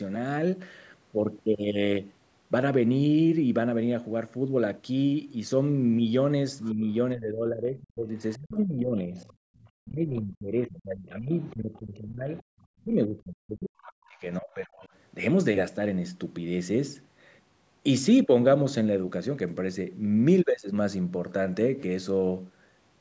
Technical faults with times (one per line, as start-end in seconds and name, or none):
6.64-6.74 other side's voice leaking through
6.72-14.86 speech suppressed in double talk
8.20-9.66 other side's voice leaking through
9.47-9.56 background gated by the echo canceller
11.35-12.84 other side's voice leaking through
14.17-14.86 other side's voice leaking through